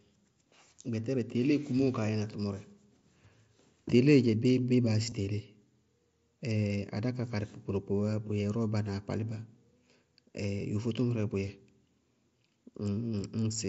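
At 5.10 to 5.12 s there is a brief buzzy patch where the sound holds at full level instead of moving on, followed by a slight warble as the real audio picks up again. This is concealed Bluetooth headset packet loss: about 22.5 ms of audio from the headset never arrived, which fits roughly three lost packets, and the receiver filled the hole by repeating the closest-matching recent stretch of waveform. The surrounding mSBC wideband headset coding carries the speech either side of the gap.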